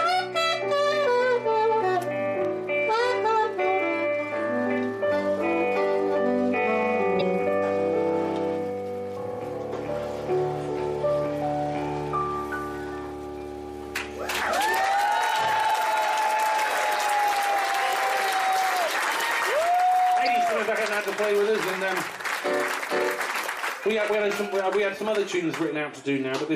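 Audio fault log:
7.17–7.22 s, 17.78–17.82 s and 20.23–20.28 s: damaged data in a compressed stream. At each of these three points, a short stretch of the encoded bytes reaching the decoder was corrupt. The decoder could not read the affected frames, lost sync and had to hunt for the next valid frame header before it could decode normally again. Each event lasts about 44 ms and is heard as a brief chirp, squawk, click or short hole that breaks abruptly into the audio.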